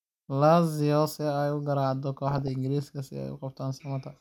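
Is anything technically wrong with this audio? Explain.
Yes. From 2.31 to 2.48 s the speech is hit by DAB burbling. Bit errors from weak reception slip past error correction into the MP2 data, so wrong samples put short blips of noise in single sub-bands. About nine frames are damaged. It sounds like burbling blips of noise in the speech. A spectrogram shows isolated bright blocks in separate bands, and the waveform shows brief ragged bursts.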